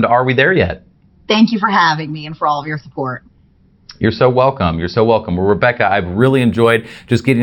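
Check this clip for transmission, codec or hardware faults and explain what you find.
One fault shows up, confined to the closing stretch of the speech.

Imaging from linear upsampling, from 6.19 s to 7.42 s: the sample rate was raised by joining successive samples with straight lines, which filters poorly. The top of the band, up to about 6 kHz, is dulled, and a faint mirrored copy of the spectrum sits between 6 and 12 kHz, roughly 30 dB down, which fits a 12 kHz source raised to 48 kHz. It is heard as a slight metallic shimmer on sibilants.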